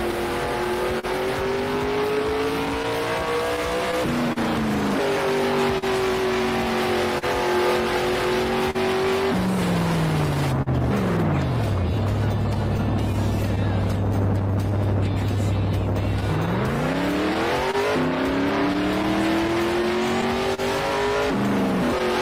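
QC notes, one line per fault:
Throughout: clock drift between sender and receiver. The sending device's clock runs slow, by something like 3 percent against the receiver's, so the jitter buffer keeps draining. The receiver repeatedly has to stretch or pad the stream to avoid running dry. Small timing stumbles recur at uneven intervals across the whole clip rather than clustering in one spot.
2.18–15.37 s: repeated timing corrections. To keep pace with the slow sender, the receiver repeatedly duplicates short slices of audio, all in the same lengthening direction and at irregular spacing. Together they add roughly 50 ms over the stretch. Each edit is tiny, so it comes across as a faint hiccup or a slightly unsteady pulse, with no obvious jump.
0.11–10.68 s, 12.54–14.43 s, 16.21–22.02 s: scattered short gaps. Packets went missing or arrived late, one at a time, and the receiver bridged each hole by extending the preceding sound. 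The first and last stretches hold around fifteen small patches each, the longest about 40 ms. The middle stretch has several briefer ones, around 10 ms at most. Roughly 3 percent of each stretch is filled in, heard as brief ticks, smears or momentary stutters.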